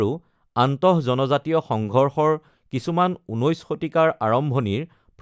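No technical faults are audible.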